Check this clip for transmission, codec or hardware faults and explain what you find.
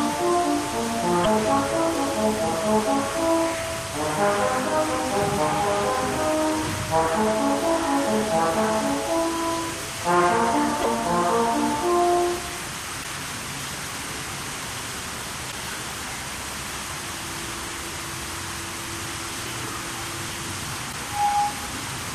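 Damaged data in a compressed stream occurs five times, at 1.22–1.26, 10.80–10.86, 13.00–13.05, 15.48–15.54 and 20.89–20.94 s, each about 50 ms. Corrupted frames make the decoder lose sync, leaving a brief disruption that appears as a short vertical break in the spectrogram and waveform.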